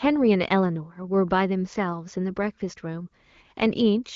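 Nothing goes wrong anywhere in this speech clip, and the wideband HD Voice coding it passes through leaves the speech sounding clear.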